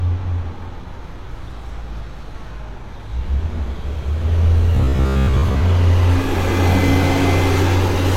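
From 4.75 to 5.65 s, new audio likely stopped arriving in time, so the software kept replaying a 15 ms slice while most of the real audio was skipped. This is robotic sound from repeated short buffers: a rigid, metallic buzz locked at 66.7 Hz.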